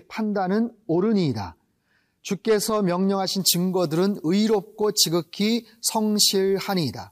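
Pre-emphasis left on, from 3.40 s to the end of the clip: the treble boost applied for FM-style transmission, matching a 75 µs curve, was never undone by the corresponding de-emphasis cut. Highs stand about 14 dB above the 1 kHz level by 10 kHz, so the speech abruptly turns thin, bright and harsh, with exaggerated sibilance and little body in the lower range.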